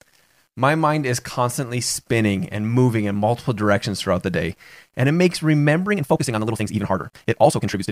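At 5.87 s, right after "day and it makes", the speech turns into a time-stretched section that runs to the end of the clip at 7.92 s. The pace jumps to about 1.9 times normal speed, yet the pitch does not rise. The sound is rushed. This likely comes from software squeezing the audio to fit a shorter length, dropping short pieces to keep the pitch steady.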